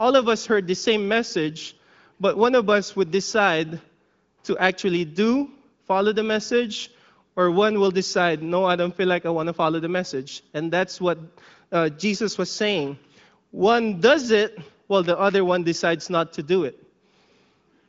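Nothing stood out on listening to this speech, which carries the band-limited sound of an AMR wideband (HD Voice) connection with nothing heard above 7.5 kHz.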